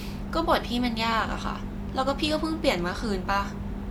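No technical faults are audible.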